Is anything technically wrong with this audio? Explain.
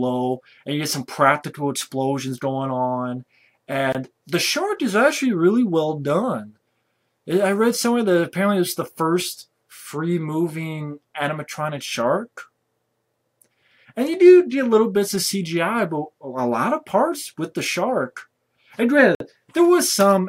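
Yes. Twice the output buffer was likely left unfilled, so a block of digital silence replaced the audio: 23 ms at 3.92 s, which fits a 1024-sample block, and 53 ms at 19.15 s. Each abrupt cut and return leaves a short hole.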